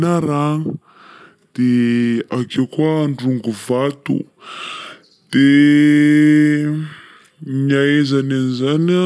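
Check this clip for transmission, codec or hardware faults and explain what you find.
One fault runs through the whole clip: a wrong sample rate. The speech plays at about 0.69 times its proper speed and sits 6.45 semitones lower, which fits audio recorded at 32 kHz being played back at 22 kHz with no rate conversion. Because the samples are simply clocked out more slowly, duration stretches and every frequency drops by the same ratio. Voices come across deep, slow and drawn out, with formants shifted down along with the pitch.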